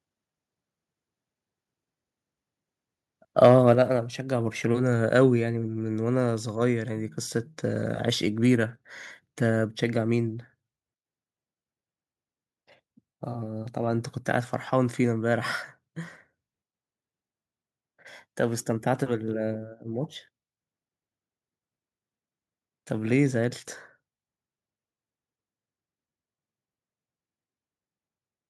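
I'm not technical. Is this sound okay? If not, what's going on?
No. From 3.44 to 3.72 s the loudest syllables turn harsh and crackly. That is microphone overload: the input was likely set too high, so the peaks of the speech hit the converter's ceiling and their tops were flattened. Only a small share of the sound is cut this way.

At 3.75 s the speech and background suddenly become noticeably quieter in one step. That is the microphone volume stepped down, likely the call software reacting to the distorted peak just before by lowering the input level.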